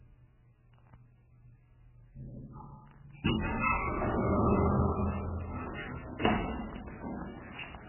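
Sounds with heavy MP3 compression throughout: nothing above 3 kHz, watery swirling texture and smeared attacks, likely from a very low bitrate around 8 kbps.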